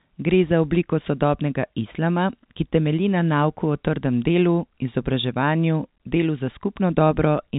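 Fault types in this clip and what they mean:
Nothing's wrong with this speech clip.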